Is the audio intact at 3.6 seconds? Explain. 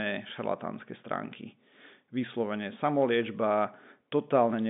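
Yes, the speech at 3.6 s is intact, with only the expected telephone-band character of G.711 coding, which carries nothing above about 3.8 kHz.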